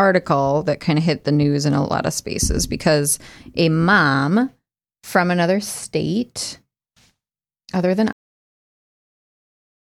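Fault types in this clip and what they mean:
Cut-off end: the final buffers of the recording were never written out, so the speech halts abruptly at 8.13 s, right after "other than", mid-sound with no natural decay, and the remaining 1.85 s is flat digital silence.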